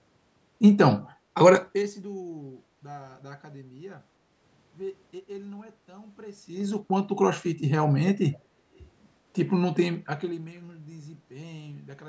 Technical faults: zipper noise; echo leak

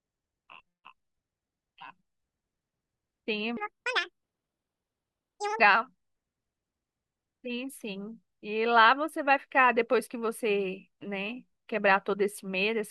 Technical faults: section at the wrong speed

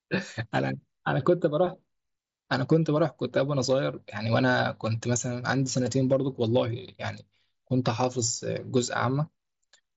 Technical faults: none

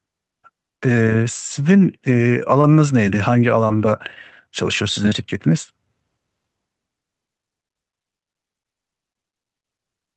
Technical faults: short concealed packet loss

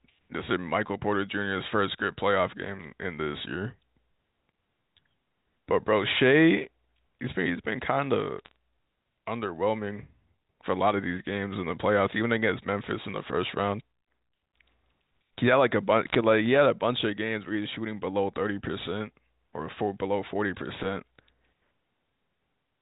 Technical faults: bit errors on a digital phone line

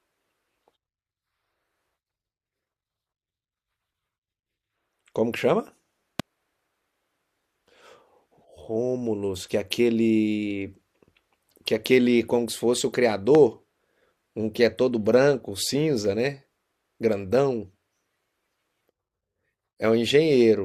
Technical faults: loud pop

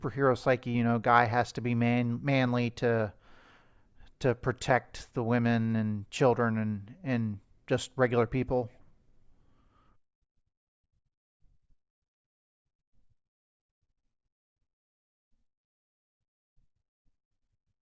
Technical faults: none

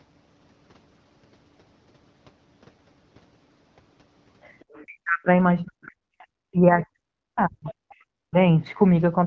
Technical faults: other side's voice leaking through; speech suppressed in double talk

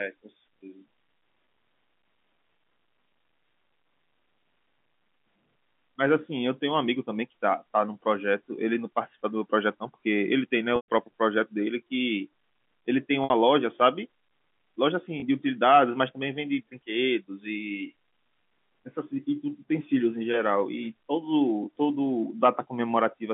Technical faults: packet loss with pitch repetition

